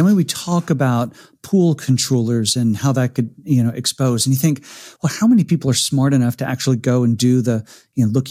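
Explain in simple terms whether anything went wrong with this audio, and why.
Between 1.54 and 2.52 seconds, just before "and how that", the speech has hard clipping. The loudest moments were slightly too big for the recording to hold, so their tops were sliced flat, causing brief crackles only on those peaks, not a constant hiss.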